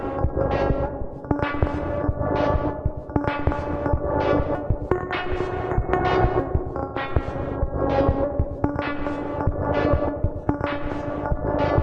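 No technical faults can be heard anywhere in the audio, and the signal stays intact and continuous throughout.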